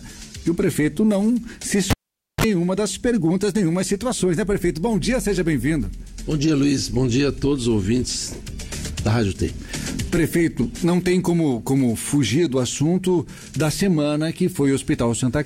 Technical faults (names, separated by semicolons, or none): cable pulled and plugged in